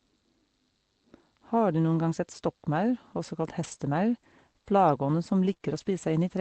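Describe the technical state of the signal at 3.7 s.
From 3.63 to 3.73 s, just after "også kalt", the signal is a lost packet rebuilt from error correction. About 60 ms, which fits three 20 ms packets, never arrived intact, and the decoder played the low-bitrate copies carried in the packets that followed. The sound continues without a gap but turns briefly rough and noisy. The waveform stays unbroken. On a spectrogram the harmonics blur into a grainier, noise-filled patch within the Opus call path's 8 kHz band.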